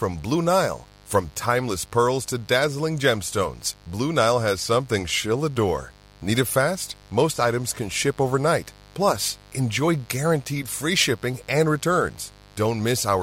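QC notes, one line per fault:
Throughout: mains buzz, a steady raspy buzz under the speech at about 30 dB below it, built from 50 Hz harmonics that switching spikes push into the kilohertz range.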